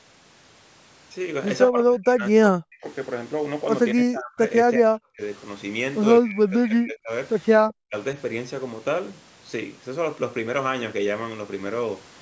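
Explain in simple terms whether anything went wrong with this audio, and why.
The speech repeatedly drops away or breaks into fragments at 1.7 to 2.85 s, 3.95 to 4.41 s, 4.64 to 5.21 s, 6.21 to 7.12 s and 7.56 to 7.95 s. This is likely speech suppressed in double talk: the call's echo canceller mistook the talker for echo and turned them down.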